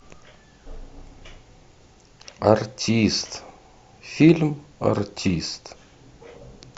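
A jump near the very end of this speech recording, between 6.36 and 6.40 s, marks a spot where the sound lurches forward, dropping around 50 ms of audio. The fault is compressed frames skipped: whole frames of the encoded stream were either missing or rejected by the decoder as corrupt, so playback jumped ahead by a frame multiple.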